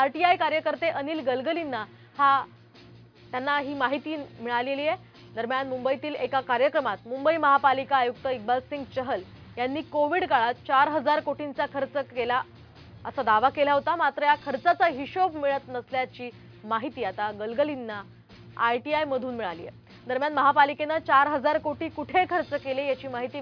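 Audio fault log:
No faults: the signal holds steady and intact throughout.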